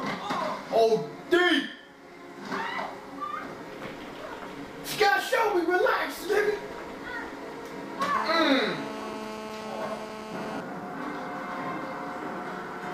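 A nearby 2G phone's 217 Hz transmit bursts were rectified by the audio circuit, causing GSM phone buzz from 8.15 to 10.61 s: a steady, raspy, harmonic-rich buzz about 9 dB below the signal.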